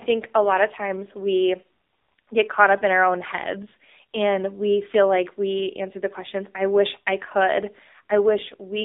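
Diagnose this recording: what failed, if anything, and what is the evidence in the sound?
The failure is at the codec stage: the speech has passed through the AMR narrowband mobile codec for its whole length. Nothing survives above about 3.7 kHz or below about 300 Hz, which points to 8 kHz sampling. The codec damage is plainly audible, a buzzy, synthetic quality that fits a low mode near 7.4 kbps, where few pulses per 5 ms rebuild each sound. A simple telephone band filter would narrow the sound the same way but leave it natural rather than synthetic.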